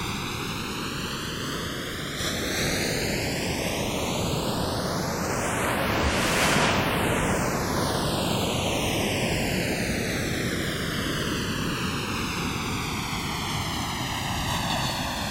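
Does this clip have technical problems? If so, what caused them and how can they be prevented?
Yes. Channels drifting apart runs throughout: the two channels sit on separate clocks, roughly 150 parts per million apart, so their offset grows to around a millisecond. In mono this gives slow flanging, seen on a spectrogram as comb notches sweeping across frequency. Clocking both devices from one shared word clock prevents it.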